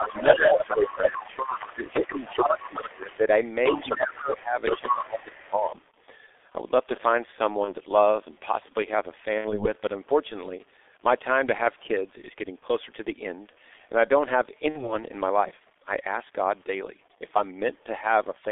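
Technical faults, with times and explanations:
Throughout: G.723.1 codec. The speech is coded at 6.3 kbit/s in 30 ms frames inside a 300 Hz to 3.6 kHz line band, so it sounds muffled and hoarse with smeared consonants. A spectrogram shows nothing above 3.6 kHz and blocky, coarse harmonics.
0.00–1.28 s, 1.71–3.24 s, 3.77–5.74 s: speech suppressed in double talk. The talker's level sags by roughly 10 dB in the first span and about 15 dB in the later two, likely an echo canceller ducking both voices at once. The waveform shows uneven, hollowed-out stretches with broken energy.
0.04–3.19 s and 3.65–5.49 s: other side's voice leaking through. A second voice sits only about 5 dB under the talker, likely loudspeaker pickup that was not cancelled. A spectrogram shows a second set of overlapping harmonic tracks.
7.64–7.75 s, 9.38–9.72 s, 12.59–12.65 s, 14.69–14.95 s: VoIP packet loss concealed by the speech codec. 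One 30 ms frame was lost at 7.64 and at 12.59 s, and two frames (60 ms) at 9.38 and 14.69 s. The decoder repeats its last pitch and filter with falling gain, giving a short buzzy tone or coloured noise that fades and stays weak for a while afterwards. A spectrogram shows flat, frozen harmonics tapering off.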